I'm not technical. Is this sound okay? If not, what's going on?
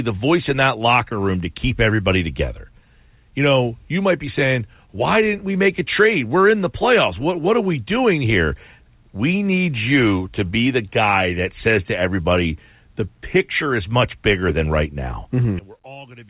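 No, not quite. There are a few timing and level problems, all in a 16-second speech clip that has the slightly muffled, phone-like sound of a call line, with nothing above about 4 kHz.

The first is clock drift between sender and receiver. The sending side's clock ran about 1.5% slow, so the receiving end kept running short of audio and had to make up the gap. You'll hear small, uneven hiccups spread through the whole clip.

The second is repeated timing corrections, from about 0.79 s (right after "the voice in that") to 14.9 s. The receiver kept repeating tiny bits to stretch things out, adding about a fifth of a second overall. The pace drags slightly, to about 99% speed.

The third starts at 15.59 s and runs to the end. The voice suddenly drops to a faint whisper. The likely cause is one channel inverted, meaning one stereo side got flipped upside down, so the two sides cancel each other out when they're mixed together.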